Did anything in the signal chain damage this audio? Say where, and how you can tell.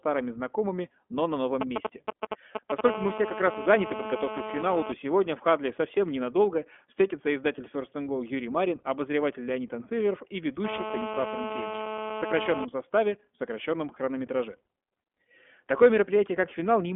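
Yes. Throughout, the speech sounds thin, slightly rough and synthetic, with nothing above 3.6 kHz and a 250 Hz to 3.4 kHz phone-line band. That points to the codec stage: iLBC coding each 20 ms frame on its own, which fits its 15.2 kbps mode.

From 1.61 to 2.81 s, right after "знакомыми но на новом", a galloping dit-dit-dit of brief 217 Hz buzzes appears at roughly the speech level. These are GSM signalling bursts. A nearby 2G phone's radio pulses were rectified in the analogue wiring.

A hard, raspy 217 Hz buzz rich in harmonics runs from 2.85 to 4.92 s, ending before "сегодня в", at about -9 dB. It returns from 10.65 to 12.65 s, before "составе в сокращенном хронометраже", at about -8 dB. This is GSM phone buzz: a 2G phone in a call, its bursts rectified by the analogue circuitry.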